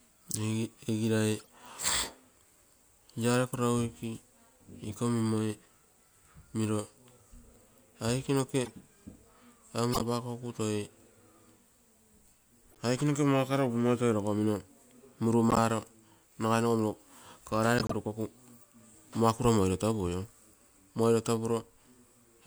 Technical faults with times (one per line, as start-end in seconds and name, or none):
1.37-1.49 corrupt frame decoded
8.64-8.71 corrupt frame decoded
9.92-10.01 corrupt frame decoded
12.70-12.77 corrupt frame decoded
15.50-15.58 corrupt frame decoded
17.78-17.93 corrupt frame decoded